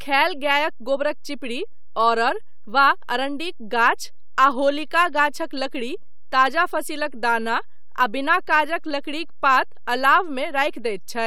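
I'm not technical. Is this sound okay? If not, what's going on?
No. The whole speech recording carries a DC offset from start to finish. The waveform sits slightly off its centre line instead of swinging evenly around zero. You won't hear it, but it wastes loudness room and adds steady, unheard energy at the very bottom.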